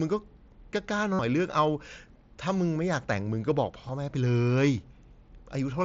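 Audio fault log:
1.13–1.19 s and 3.88 s: concealed Bluetooth headset packet loss. Missing packets were patched with recent waveform. The 60 ms gap buzzes as repeated cycles; the 7.5 ms one is near-invisible.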